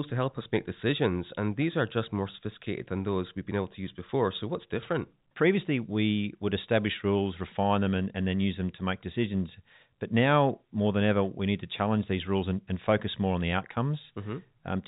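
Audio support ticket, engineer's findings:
No faults found: the speech signal is carried over G.711 A-law telephone coding at 64 kbps, band-limited below 4 kHz, with at most faint coding damage.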